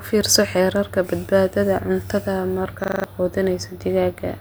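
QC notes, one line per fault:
2.84–3.04 s, system hang loop: right after "fiirso xeerarka badbaadada cuntada", a 40 ms slice repeats five times, a 25 Hz buzz replacing about a fifth of a second of speech.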